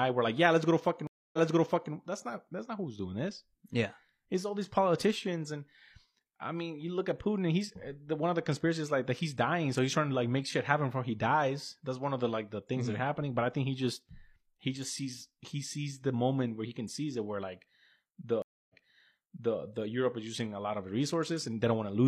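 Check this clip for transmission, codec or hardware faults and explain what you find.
Two stream reconnects break this speech clip. The first runs from 1.07 to 1.94 s, right after "yeah let's go to". The second runs from 18.42 to 19.57 s. Each time the connection dropped and the player went quiet, for 260 ms and then 270 ms. It then restarted a fresh decoder mid-stream. The server resent a burst, so playback picks up earlier than where it stopped. That is about 0.6 s back the first time and 0.88 s the second. A stretch of sound repeats after each gap.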